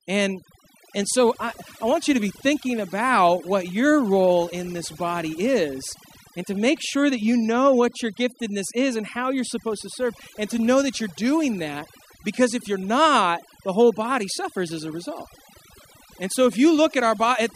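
Overdone noise removal runs through the whole of this speech clip. A noise reduction stage set far too aggressively keeps pulling individual frequency bands down to almost nothing whenever their level sits close to what it has judged to be noise, and the softer components of the voice are caught along with the noise. The gaps between phrases collapse into near silence sprinkled with twinkling specks.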